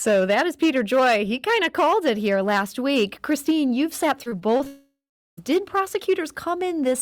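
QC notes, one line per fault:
Throughout: hard clipping, peaks driven about 7 dB past the limit and cut flat, roughly 3% of samples, adding harsh fuzz to louder speech.
4.23–4.67 s: repeated packet loss (robotic sound), five short gaps after "you've sat", each patched by repeating sound, giving choppy speech with pieces missing.
4.67–5.39 s: long network dropout, likely a stall where no audio arrived for about 0.7 s; the last sound is stretched into a fading buzz, then about 0.41 s of silence.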